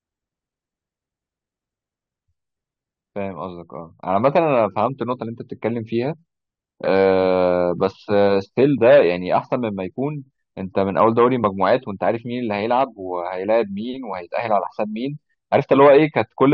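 Nothing in the speech recording points to a technical fault anywhere along its length.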